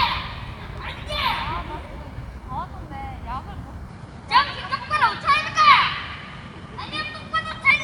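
At 3.89 s the sound abruptly loses everything above 11.4 kHz and a new, faint background noise appears, about 45 dB below the signal, likely an input switched to a poorer device. Unlike a simple filter, it brings its own noise floor, with no gap and no level jump.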